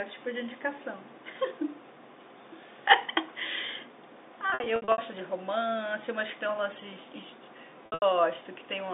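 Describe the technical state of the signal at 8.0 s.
At 8.0 s the sound briefly turns held and buzzy, then sags toward silence before picking up again. This is packet loss with pitch repetition, spanning 7.86 to 8.02 s: about 140 ms of audio dropped out in scattered gaps across 160 ms, which fits lost 20 ms packets. The receiver filled each gap by repeating the last pitch period. In the longest gap, about 80 ms, that repetition faded out before the signal returned through the G.711 telephone band of 250 Hz to 3.7 kHz.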